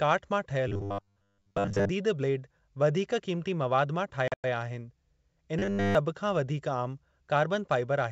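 From 0.68 to 1.89 s, new audio likely arrived too seldom, so the playback software kept repeating a short stretch, about 10 ms long, while most of the real audio in that span was skipped. The repetition imposes a fixed 100 Hz buzz, turning the speech rigid and metallic while its rough outline still comes through.

At 4.28 to 4.45 s, packet loss on an ADPCM call drops about 140 ms of audio scattered over 160 ms, with the longest gap 100 ms, which points to several lost packets. The gaps are filled with hard-edged silence, and the decoder's predictor and step size drift from the sender's, so the returning speech comes back unsettled within the otherwise clean G.722 wideband band.

From 5.59 to 5.95 s, the same robotic sound from repeated short buffers returns. Here essentially all of the audio is replaced by repeats of a roughly 10 ms segment, giving a steady 100 Hz metallic drone throughout.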